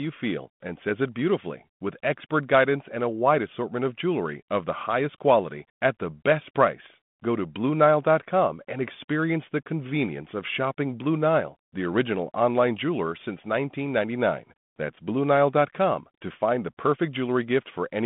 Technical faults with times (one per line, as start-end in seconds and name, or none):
none